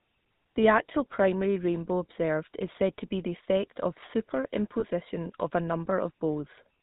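Throughout, the speech passes through a GSM full-rate codec, likely a 13 kbps stream, which cuts everything above 4 kHz and leaves a plainly audible buzzy, gravelly roughness. From 4.8 to 4.85 s, just before "of a", lost GSM frames, consistent with a single 20 ms frame, are patched by repeating the last good frame, producing a brief rough, metallic ring.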